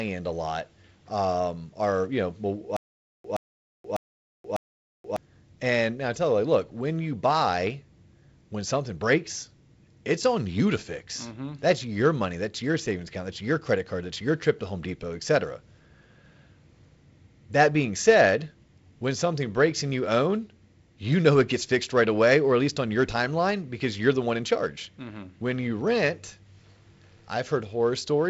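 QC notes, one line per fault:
2.77–5.16 s, stutter with silent gaps: playback likely stalled after "um are you know", replaying a 122 ms fragment four times, each followed by 478 ms of digital silence (a 600 ms cycle), so audio from that span is lost before "and now I tell".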